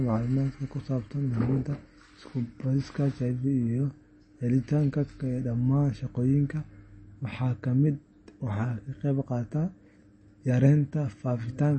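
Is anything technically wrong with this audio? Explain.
Yes. Throughout, the speech carries MP3 compression damage, likely from a low bitrate near 32 kbps. Nothing sounds above 8.3 kHz, and weak detail flickers, giving a watery, swirly texture.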